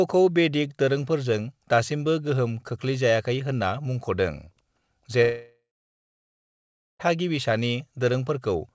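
At 5.22 s the speech breaks off, and it does not return until 7.01 s. This is likely a long network dropout. The last sound carries on briefly as a fading buzz or hiss. Then about 1.35 s of silence follows. The speech resumes with that stretch lost. Throughout, nothing sounds above 8 kHz, which fits a G.722 call codec.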